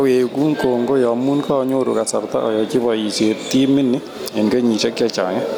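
Gain pumping runs through the whole speech recording, with a gain swing of around 10 dB. The likely cause is input gain set far too high, with a fast limiter pulling the level down on each peak. The room noise sits about 40 dB below the speech.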